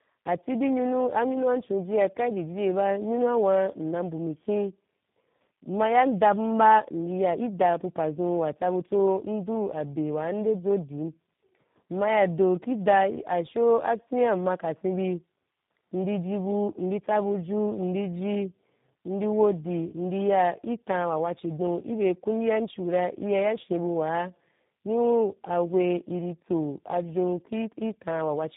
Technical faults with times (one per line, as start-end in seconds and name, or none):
0.00-28.57 tandem speech coding